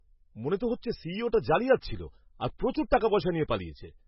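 Speech with MP3 compression damage throughout: nothing above 5.5 kHz, with watery, swirling heavy artefacts, likely from a low bitrate around 16 kbps.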